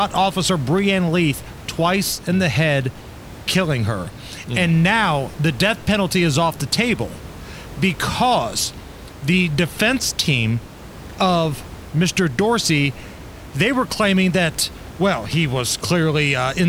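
No technical faults are audible in this speech; the only background is room noise sitting about 18 dB below the speech, which belongs to the recording space rather than the system.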